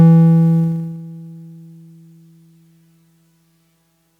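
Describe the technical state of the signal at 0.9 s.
At 0.9 s the music is in the middle of a zipper noise passage that runs from 0.6 to 1.0 s. The level drops by roughly 10 dB, but in unsmoothed 1 dB jumps at about 30 per second, and every jump leaves a small click. The result is a fast ticking that rides on the music while it fades. A smooth fader move would dip without any of this grainy stepping.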